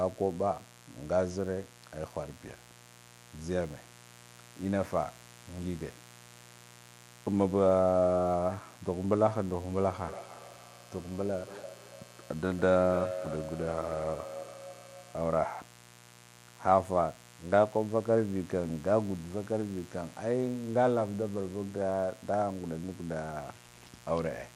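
A speech recording carries a mains buzz from start to finish. It is a steady, raspy hum built on 60 Hz, with harmonics stacked well up the spectrum. It sits about 25 dB below the speech. The rasp points to sharp switching spikes, twice per mains cycle. A dimmer, a rectifier or a missing cable shield could let them into the signal path. From 9.71 to 15.26 s there is a feedback echo between two devices. The speech comes back at a fixed delay of roughly a third of a second. The echo sounds thinner and more ringing than the original. At its loudest it is about 11 dB below the speech. Two devices in one room share a call, and one plays back what the other's microphone sent. That microphone picks it up again. Each device's echo canceller removes only its own playback, so the loop gets through.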